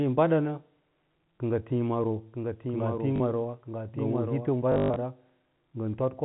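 At 1.36 to 1.38 s a single 20 ms packet is lost, and the receiver fills the gap by repeating the last packet. This packet loss with last packet repeated gives a small blip. On the waveform it shows as a duplicated segment.

From 2.34 to 4.50 s a doubled audio track runs. A full-band copy trails the original by roughly a second at about 5 dB lower. It is dry, with no decay or room colour, and it starts and stops abruptly. A likely cause is a second, slower capture path. On the spectrogram a fainter duplicate of the speech patterns appears, shifted in time, and like the original it stops at the 4 kHz ceiling of the telephone band.

Within that stretch, at 3.16 to 3.20 s, 40 ms is lost and filled with repeats of the last packet, producing a brief stutter.

At 4.72 to 4.96 s, 180 ms is lost across 240 ms, with the longest run lasting 120 ms. That run buzzes robotically at 50 Hz. The waveform shows identical 20 ms blocks repeating, and the spectrogram shows frozen, striped harmonics.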